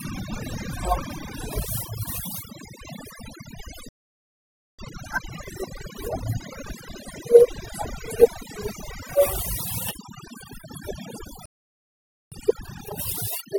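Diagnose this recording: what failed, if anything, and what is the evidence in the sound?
Overdone noise removal at the call-processing or post-processing stage runs through the whole speech clip. Frequency bands near the noise estimate are pulled down hard, leaving near-silent gaps with twinkling specks. On a spectrogram, the background shows as scattered isolated dots and the speech edges look ragged.

Playback stalls cut the sound dead from 3.89 to 4.79 s (about 0.9 s) and from 11.46 to 12.32 s (about 0.86 s). A player buffer likely ran dry, or its thread was blocked, before output resumed. The waveform shows flat silent blocks, and the spectrogram shows blank vertical bands.

Time-compressed catch-up follows each stall as the player drains its backlog. From 4.79 to 7.79 s the speech runs at 1.15 times normal speed, and from 12.32 to 13.18 s it runs at 2 times normal speed. In both stretches the pitch stays the same. 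Spectrograms show normal harmonic spacing, but syllables are packed tighter, with small cross-fade seams.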